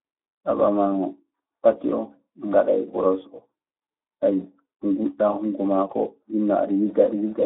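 Speech runs through a Speex codec for the whole clip, sounding hoarse and noisy at a rate that fits about 11 kbps. A spectrogram shows energy confined to 300 Hz–3.5 kHz, with smeared, grainy harmonics where the sparse excitation coding blurs voiced detail.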